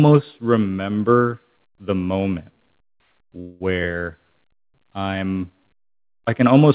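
A call audio freeze runs from 3.4 to 3.62 s. The speech stops moving forward and the last sound stretches into a buzzy hiss for about 0.2 s without dropping to silence. The speech then resumes exactly where it paused, so nothing is lost, but everything after arrives about 0.2 s later. The likely cause is packets held up in transit, emptying the jitter buffer so the receiver had to fill the gap. Throughout, nothing above 4 kHz is heard, consistent with a narrowband call codec such as G.711.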